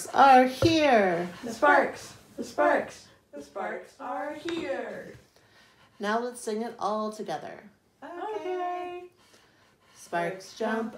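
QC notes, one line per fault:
0.84–0.86 s, corrupt frame decoded: a short blip of about 20 ms, spanning what sounds like a couple of damaged compressed frames that the decoder played anyway. Flipped bits were read as wrong gains and spectral codes, so energy appears at frequencies unrelated to the surrounding sound, peaking at about -20 dBFS. On a spectrogram this shows as a brief vertical smear of misplaced energy. On the waveform it appears as a small, abrupt burst that breaks from the envelope on either side.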